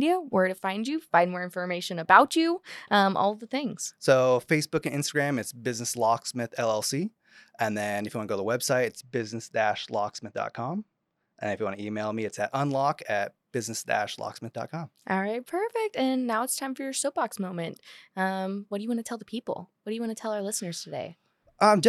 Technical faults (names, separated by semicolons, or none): channel delay (comb filtering)